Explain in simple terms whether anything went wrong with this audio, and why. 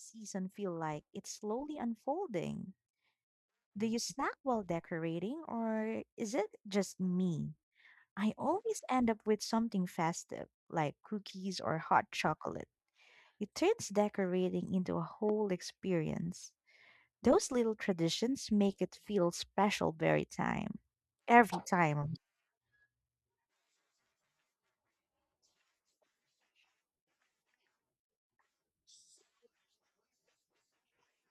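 One thing went wrong: a single loud pop at about 15.29 to 15.31 seconds. It's a brief, sharp crack that jumps out well above the speech, while the talking carries on underneath without a break. The likely cause is a sudden electrical jolt getting into the signal, such as a cable being bumped, a switch flipping, a static spark or a glitch in the audio hardware. The equipment passes that jolt through as a short burst of sound.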